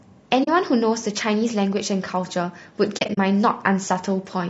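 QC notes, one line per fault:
Throughout: low-delay AAC compression. The speech sounds rough and grainy, with noise filling the gaps between harmonics and a thin, synthetic top end. Short low-delay frames resolve pitch poorly, and this fits AAC-ELD at around 32 kbps, likely the cause.
0.43–0.48 s and 2.97–3.18 s: AAC frame loss with muting. The sound fades out and back in, leaving soft-edged holes. The first is about 40 ms. The second is roughly 120 ms of gaps scattered over 200 ms, the longest around 40 ms. The lost frames decode as silence, and the overlapping windows blur the edges.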